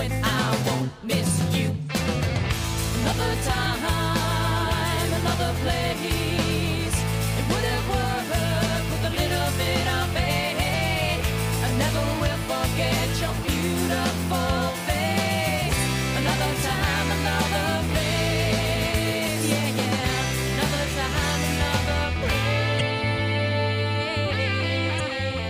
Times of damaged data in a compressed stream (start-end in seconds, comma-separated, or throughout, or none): 10.70-10.74, 19.24-19.28, 22.77-22.81, 24.96-25.01